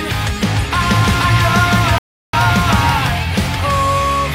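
From 0.81 s to 3.1 s a doubled audio track is present: a second, full-band copy of the sound runs about half a second behind the original at roughly the same level. It carries no decay or room colour, so it reads as a hard, out-of-step repeat, not an echo, and it appears and disappears abruptly at both ends. The likely cause is the audio being captured twice, once through a slower path, or an edit leaving two misaligned copies in the mix.

At 1.98 s a rebuffering stall cuts the audio to silence until 2.34 s, adding 351 ms to the running time. Playback ran out of downloaded data and paused until more arrived. When the sound returns it picks up exactly where it stopped, so nothing is missing. The gap is simply inserted, and it falls inside the doubled section, interrupting both copies together.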